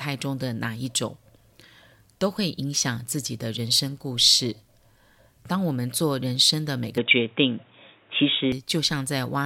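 Input switched to a poorer device, from 6.98 to 8.52 s: the speech abruptly turns dull and boxy, with nothing above 3.8 kHz, then clears again at the end of that stretch. The likely cause is the recording changing to a different microphone or a headset's narrowband call mode. There is no gap at either switch, but the level shifts by roughly 5 dB and a faint new background noise appears, sitting around 40 dB below the speech.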